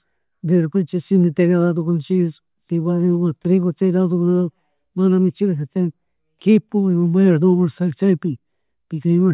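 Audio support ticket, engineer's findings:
Listened to the speech recording in full and nothing turned up that needs chasing, so there's no fault to report on this one.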